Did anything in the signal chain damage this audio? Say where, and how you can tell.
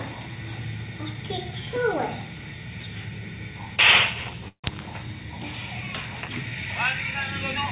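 Yes. At 4.48 s there's a call audio freeze lasting until about 4.66 s. The sound stretches into a fading buzz that drops to silence for roughly 100 ms, then carries on from exactly where it stopped, so nothing is lost; everything after just runs about 156 ms late. That points to the network stage: packets were likely held up, the jitter buffer ran dry, and the receiver filled the wait. The narrowband top end stopping at 4 kHz is just the G.711 call codec.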